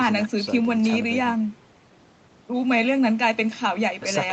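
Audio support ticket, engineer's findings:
No audible faults found.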